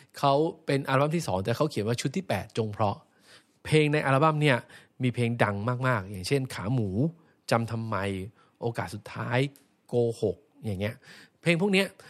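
A speech recording with no technical faults to report. Nothing heard in it calls for a time stamp or a cause.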